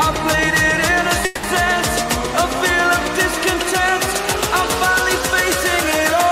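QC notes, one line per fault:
1.25–1.45 s, call audio freeze: the sound stalls and its last moment is drawn out as a fading buzz or hiss for 180 ms. No audio is lost. Playback resumes where it stopped, now 180 ms late. Likely delayed packets emptied the jitter buffer.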